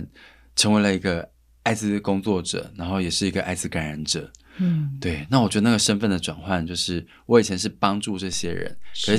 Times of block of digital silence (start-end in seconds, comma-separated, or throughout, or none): none